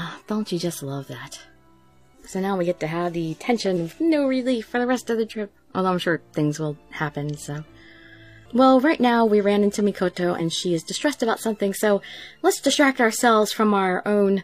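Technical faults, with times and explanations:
3.72 s, 10.36–10.40 s and 12.73–12.77 s, compressed frames skipped: The audio jumps forward three times. The first jump loses roughly 100 ms, and the later two lose about 50 ms each. These sizes fit whole frames of about 46.4 ms going missing, two frames at first and one after. The decoder never plays them.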